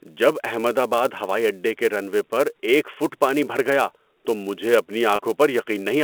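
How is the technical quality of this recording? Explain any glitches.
The recording has two faults: a steady buzz running under the whole speech clip, and one brief glitch near the end. It has the narrow telephone sound of G.711 coding, limited to roughly 250 Hz to 3.4 kHz.

Throughout, a fine 375 Hz buzz tracks the speech level. This comes from a filter restarted on every block: it drops its state at each block, which fits a 128-sample block, leaving a small repeating click.

From 5.16 to 5.19 s, the sound briefly holds on a slightly buzzy tone. This is packet loss with pitch repetition: about 30 ms went missing, and the receiver filled the gap by repeating the last pitch period.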